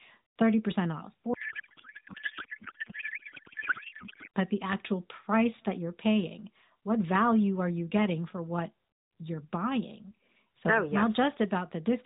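From 1.34 s to 4.28 s, just before "but the actual price", there is a codec payload misread. The AMR-NB stream was packed in octet-aligned mode but decoded as bandwidth-efficient, so every frame's fields are read from the wrong bit positions. The speech is replaced by garbled noise and warble that hardly follows it. Outside that span the narrowband codec's light coloration fits a 12.2 kbps mode, band-limited below 4 kHz.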